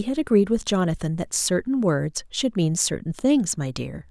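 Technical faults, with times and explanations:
Nothing technical stands out in this bit of speech; there's no glitch or problem worth flagging anywhere in it.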